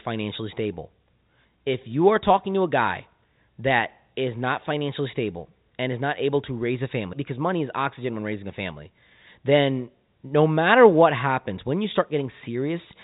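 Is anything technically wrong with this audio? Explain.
No, nothing technically wrong can be heard in this speech clip. It carries the band-limited sound of G.711 telephone coding, with nothing above about 3.8 kHz, which fits the 64 kbps A-law variant.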